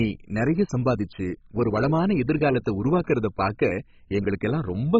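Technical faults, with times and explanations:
Throughout, MP2 compression: dull speech, nothing above 7.5 kHz, gurgling grain from flickering sub-bands rather than a steady low-pass, likely a rate near 16 kbps.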